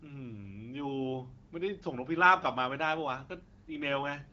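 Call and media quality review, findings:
No findings in this call and media quality review; the speech passes through the AMR wideband (HD Voice) codec at 12.65 kbit/s with no fault to report.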